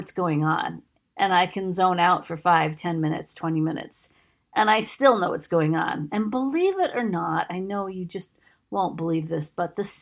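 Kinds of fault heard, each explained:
Nothing stood out as a fault on listening to this speech recording.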